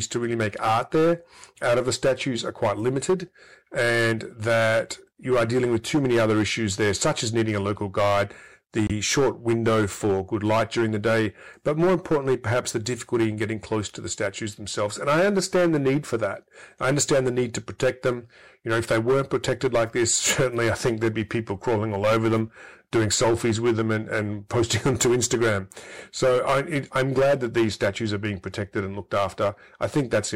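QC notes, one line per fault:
Throughout: hard clipping. The speech is driven about 12 dB past what the chain can pass, so around 7 percent of samples are sliced flat. This gives harsh fuzz on every loud syllable. The waveform shows squared-off plateaus at the peaks, and the spectrogram shows harmonic smear reaching high up.
5.24, 8.87 to 8.91 and 12.96 to 13.01: corrupt frame decoded. Damaged compressed data was played anyway, putting energy at wrong frequencies. The result is short chirps or blips lasting about one or two frames each. The first is faint, near about -40 dBFS. The second is the loudest, near about -10 dBFS, and the third sits near about -20 dBFS. On a spectrogram each appears as a brief, sharp-edged block of misplaced energy.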